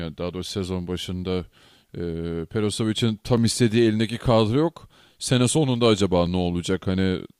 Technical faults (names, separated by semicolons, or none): clock drift buffer slips